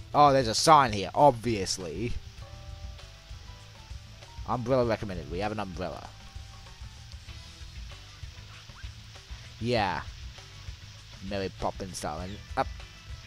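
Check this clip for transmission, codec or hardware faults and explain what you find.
No transmission, codec or hardware faults turn up here.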